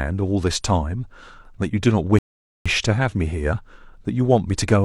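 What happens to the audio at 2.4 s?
A rebuffering stall silences the speech from 2.19 to 2.66 s while the player waits for data; unlike a dropout, it resumes exactly where it stopped, adding 0.47 s.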